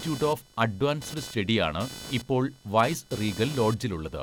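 Computer activity noise runs through the whole recording: a buzzy, chirping whine pulsing at around 500 Hz, roughly 15 dB below the speech. Shifting processor or graphics load disturbs the ground shared with the audio circuit, so the noise tracks computer activity, not the voice.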